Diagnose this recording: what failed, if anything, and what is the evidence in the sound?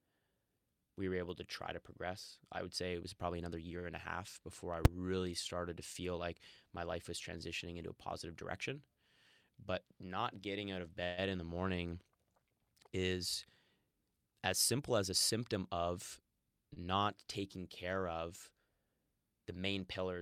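Short stalls from late packets occur at 3.79–3.87 s (about 56 ms held) and 16.74–16.78 s (about 27 ms). The jitter buffer ran dry and stretched the last speech sound, which is briefer and steadier than a freeze.

Invalid numbers at full scale produce one sharp bang at 4.85 s. In a 5 ms block at the processing or sample-format stage, the output locked to maximum value. This is not an overload of real signal.

Jitter buffer speed-ups run from 9.49–9.99 s at 108% (roughly 50 ms removed) and from 14.32–15.75 s at 106% (roughly 100 ms). The speech hurries while pitch stays unchanged, unlike resampling.

A call audio freeze at 11.04–11.20 s fills 135 ms with the last sound continued and fading, and the speech then resumes without loss. It is likely caused by network-delayed packets emptying the buffer, and it is longer than the short stalls.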